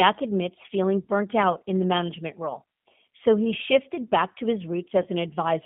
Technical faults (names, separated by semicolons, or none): G.729 codec; VoIP packet loss concealed by the speech codec